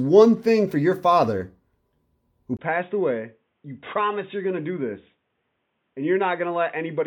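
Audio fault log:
2.57–7.06 s, input switched to a poorer device: after a silence of about 20 ms, the speech turns dull and boxy and stays so to the end, with nothing above 3.8 kHz, the level dropping roughly 10 dB, and a faint new background noise well under the speech. The likely cause is the input changing to another microphone or a headset's call profile, whose narrower band, different gain and own noise floor replace the original device's sound.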